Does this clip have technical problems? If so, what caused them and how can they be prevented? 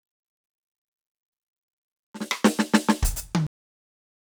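Yes, there's a cut-off end: the music stops dead at 3.47 s, mid-sound, and drops straight to digital silence with no decay for the last 0.9 s. The final buffers never got written out before recording or playback stopped. To prevent it, flush and close the stream fully before stopping.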